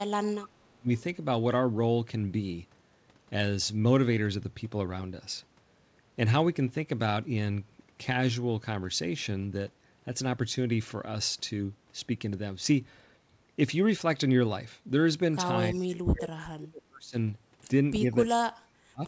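From 0.0 to 0.89 s the speech dips by up to about 35 dB, likely speech suppressed in double talk, where the echo canceller attenuated the near talker along with the far-end echo. From 15.7 to 17.15 s the same suppression likely recurs, with drops of about 40 dB. Within it, from 15.75 to 15.79 s, a faint copy of the voice arrives 340 ms late, roughly 30 dB below the speech, likely an echo leak past the loudspeaker-side canceller. From 18.34 to 19.04 s the speech again drops by about 40 dB, likely from double-talk suppression. The band stops at 8 kHz throughout, as the call codec allows.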